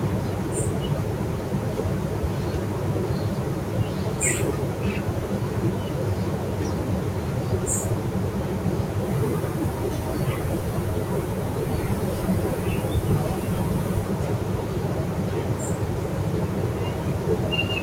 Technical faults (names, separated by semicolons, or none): none